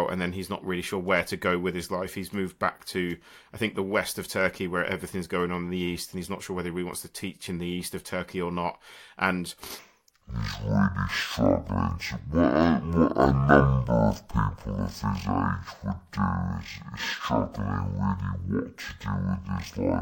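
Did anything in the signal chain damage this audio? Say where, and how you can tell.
Yes. From 9.79 s to the end, the speech suddenly plays at half speed and a full octave lower, with a faint mirrored copy in the upper spectrum. This is stereo read as mono at the sample-format stage: interleaved left and right samples were read sequentially as one channel.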